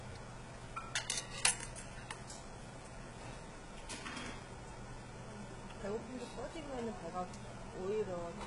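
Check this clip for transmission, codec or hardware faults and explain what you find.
One fault runs throughout: HE-AAC compression, likely the cause. The treble is rebuilt from copied lower bands, so it sounds gritty and metallic, stopping at 11.1 kHz. The heavy damage fits a very low bitrate near 12 kbps.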